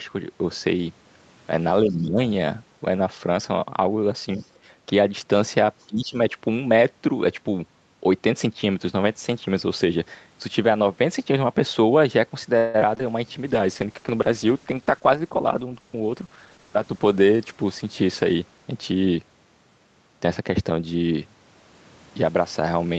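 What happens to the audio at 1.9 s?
From 1.85 to 2.19 s the speech dips by as much as about 15 dB, likely speech suppressed in double talk, with the echo canceller attenuating the talker while the far end was also active. Within that dip, from 1.91 to 1.95 s, a very faint second voice surfaces, roughly 40 dB below the speech, most likely the other side's voice leaking through as residual loudspeaker echo.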